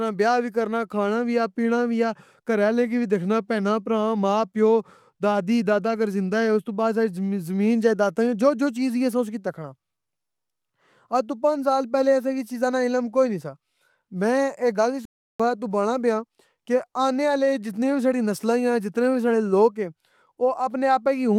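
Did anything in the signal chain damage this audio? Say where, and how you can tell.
Yes, at the playback stage. At 15.05 s, right after "میں اے گل اس", the speech cuts out to silence and resumes at 15.40 s, a gap of about 0.34 s. This is a playback stall. The dropout is abrupt and clean rather than faded, and the speech picks up again after the hole. That pattern fits the player having likely run dry of buffered data or had its output thread blocked, so nothing reached the output until it recovered.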